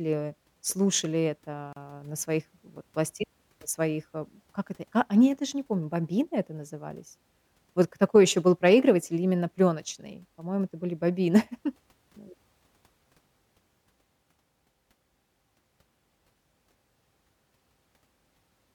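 At 1.73 to 1.76 s, just before "на своих вот пласти", a 35 ms gap at a join of encoded pieces cuts the speech. Encoder delay and end padding were left in. Unlike a dropout, the sound resumes exactly where it stopped.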